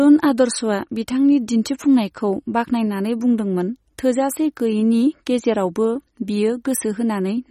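From start to finish the speech carries plainly audible MP3 compression artefacts: a watery, swirly texture and nothing above 15.9 kHz. That's likely an encoder short of bits, fitting a low rate around 32 kbps, cutting the treble and dropping weak frequency lines frame to frame.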